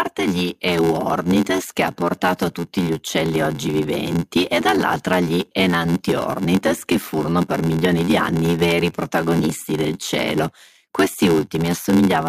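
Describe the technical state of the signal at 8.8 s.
At 8.8 s the speech carries a block size mismatch (padded), present throughout the clip. Each block read, consistent with 512 samples, is only partly filled and padded with silence, producing an 86.1 Hz buzz and slowing playback to 0.861 times normal speed while keeping its timbre.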